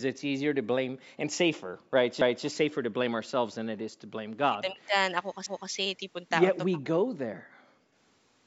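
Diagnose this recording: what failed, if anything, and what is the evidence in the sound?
The background is gated by the echo canceller. This is a call-processing fault. The room sound drops by about 38 to 39 dB at 1.64 to 1.92 s, 3.96 to 4.06 s and 7.33 to 7.95 s. The canceller clamps the microphone while the far-end loudspeaker plays, then releases it.

There are overlapping chunks at the buffer stage. At 2.21 to 2.46 s and again at 5.46 to 5.71 s, a 250 ms stretch plays twice, heard as a stutter. The spacing fits 3 s chunks, each starting 250 ms before the previous one finished.

There is an echo leak from the call processing. A faint delayed copy of the talker appears at 3.79 to 3.85 s, about 35 dB below the speech and 303 ms late. The likely cause is a far-end echo canceller that let some loudspeaker pickup back into the return path.

Speech is suppressed in double talk. The talker's level collapses by roughly 40 dB for almost half a second at 4.49 to 4.92 s. 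It dips again by roughly 20 dB for about 100 ms at 6.72 to 6.82 s. This likely comes from the echo canceller muting everything while both sides spoke at once.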